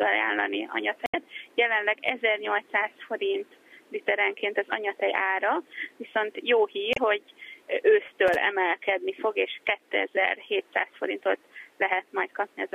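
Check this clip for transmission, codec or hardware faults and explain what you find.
Two kinds of fault are present: two bursts of damaged data in a compressed stream and one stretch of processor overload crackle.

Damaged data in a compressed stream appears at 1.03–1.15 s and 6.91–6.98 s. Corrupted bytes throw the decoder out of sync until it finds the next valid frame, giving a short chirp, squawk, click or hole. On a spectrogram each shows as a brief broadband smear breaking the surrounding pattern.

Processor overload crackle runs from 8.08 to 8.35 s. Buffers of roughly 1.5 ms were not finished in time, about five of them, and each miss dropped to silence. The result is a gritty tearing over the sound, seen in the waveform as tiny flat gaps with abrupt edges and on a spectrogram as thin vertical lines.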